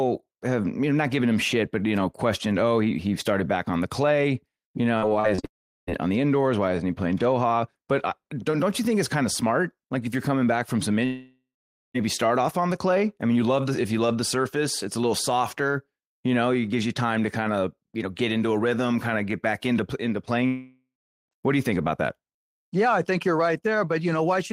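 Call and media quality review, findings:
Repeated packet loss (robotic sound), 4.97–5.45 s. Choppy speech with pieces missing. Jitter buffer/concealment: four short gaps, longest 45 ms, 140 ms missing, 29% of span synthesized by extending prior sound. Runs straight into dropout below.

Long network dropout, 5.45–5.89 s. Concealment buzz fading, then 0.38 s silence, 0.42 s of speech lost. Likely transport/network interruption starving the receiver.

Long network dropout, 11.05–11.96 s. Same pattern: fading continuation, then 0.48 s silence. 0.9 s missing, speech resumes past the gap.

Long network dropout, 20.46–21.33 s. Decaying filler, 0.43 s silence, 0.86 s lost. Stream resumes without the missing section.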